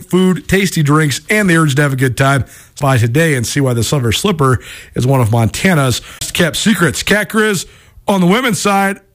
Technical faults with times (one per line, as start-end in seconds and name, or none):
2.79 CD skip
6.19-6.21 CD skip